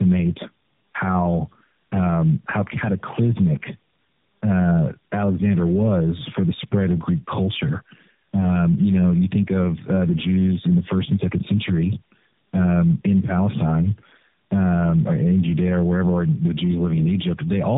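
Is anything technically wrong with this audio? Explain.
Yes. Tandem speech coding runs through the whole clip. The speech appears to have been decoded and re-encoded by three low-rate speech codecs in turn, fitting a G.729A and AMR-NB chain. Each stage compounds the last, leaving the speech rough, muffled and warbly, with nothing above 3.8 kHz.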